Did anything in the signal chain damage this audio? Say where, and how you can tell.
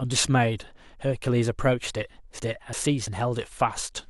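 Yes: chunks out of order from 2.39 to 3.07 s. At the buffer stage, one 341 ms chunk plays a chunk late, swapping two segments and adding three hard joins.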